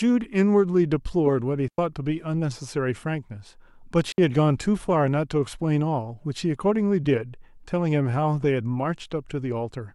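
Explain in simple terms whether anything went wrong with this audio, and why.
Twice the speech briefly drops into near silence, like a tiny hole punched in the sound: at 1.68 s for about a tenth of a second, and at 4.12 s for 60 milliseconds. No crackle or burst of noise comes before or after either gap. That clean cut is a digital wireless dropout. The radio link between microphone and receiver lost too much data, so the receiver quickly muted the audio until the signal came back.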